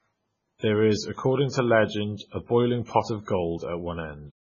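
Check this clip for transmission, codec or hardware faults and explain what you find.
Two codec faults are audible in this speech. Throughout, the sound is heavily damaged by what is likely MP3 compression at a very low bitrate, around 16 kbps. Nothing reaches above 7 kHz, and weak spectral lines flicker on and off between frames, giving a watery, swirling texture. A fixed treble ceiling together with that swirl separates it from a simple low-pass filter.

Pre-echo occurs at 0.58, 2.17, 2.85 and 3.24 s, each lasting 30 to 38 ms. Quantisation noise spread across a transform block leaks ahead of sharp onsets, so a short hiss arrives before each attack, which then sounds smeared. Because it precedes the transient, it is not reverb or a tail.

The smooth fade-out from 4.32 s to the end is an ordinary edit with no click.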